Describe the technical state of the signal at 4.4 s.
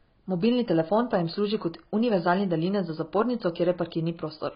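At 4.4 s the speech carries the same AAC compression damage heard through the whole clip. Nothing sounds above about 5.1 kHz, so consonants lose their edge and the tone is dull. The damage is heavy. Sibilants turn fizzy and vowels warble. This is likely the work of a low-bitrate AAC-LC encoder, which fits roughly 16 kbps. At that rate the coder drops the top band and thins out the quantised spectrum.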